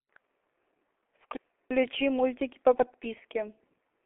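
The whole clip has passed through the G.723.1 codec, squeezed to a bitrate consistent with its 6.3 kbit/s mode inside a 300 Hz to 3.5 kHz telephone band. Nothing survives above 3.8 kHz, and heavy coding damage leaves the speech muffled and hoarse, with smeared consonants.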